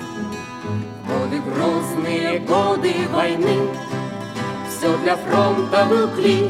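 No technical faults can be heard anywhere in this recording.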